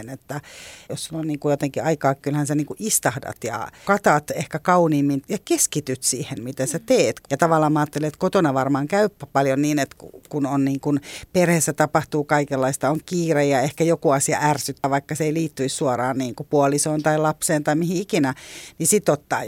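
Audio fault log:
14.84 to 14.93 s: compressed frames skipped. Right after "ja ehkä joku asia", about a tenth of a second drops out and the audio jumps ahead.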